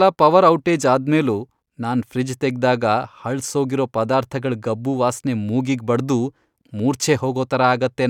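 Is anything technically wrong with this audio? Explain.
No, the speech signal shows no audible technical faults.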